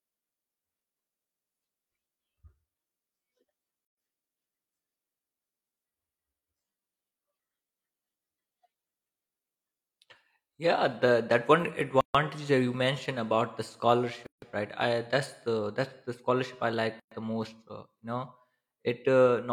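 Gaps at joins of encoded pieces occur at 3.85 s (122 ms), 12.01 s (138 ms), 14.26 s (157 ms) and 17.00 s (118 ms): separately encoded sections were butted together untrimmed, so start-up delay and end padding leave abrupt, slightly smeared silences before the speech resumes.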